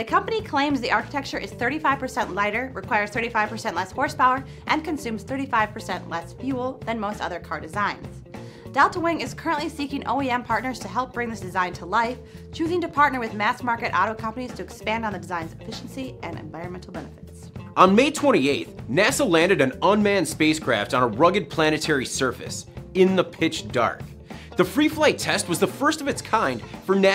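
From 15.81 s to the end, a fine hiss and roughness rides on top of the sound. It swells on louder, brighter passages and drops away whenever the audio goes quiet. This is sample clock jitter: the converter's clock wanders by something under a microsecond, so each sample lands slightly early or late. Steep, fast-changing parts of the waveform suffer most, leaving an error roughly 45 dB below the signal.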